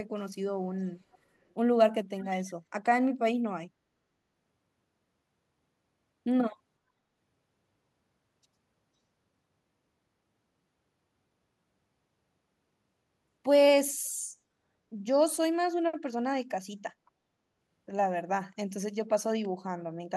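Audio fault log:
0.81–0.87 s, 1.12–1.18 s, 2.19–2.51 s: echo leak. A copy of the speech returns 507 ms late, very faint in the two short scraps and only about 15 dB down in the last. It is likely residue from a far-end loudspeaker that the echo canceller missed. A spectrogram shows the harmonic pattern repeated half a second later.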